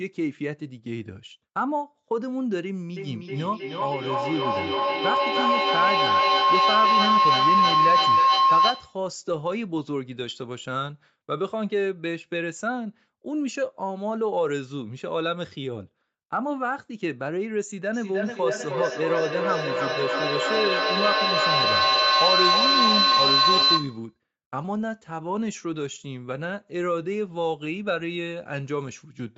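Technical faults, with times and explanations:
2.97–9.1 s, feedback howl: a tone near 1 kHz swells to about 7 dB above the speech, with the loop coming round roughly every 300 ms, as a loudspeaker-microphone loop keeps gaining level.
17.93–24.17 s, feedback echo between two devices: speech returns roughly every 300 ms, thinning and ringing, with repeats reaching about 6 dB above the speech because one device replays the other's microphone.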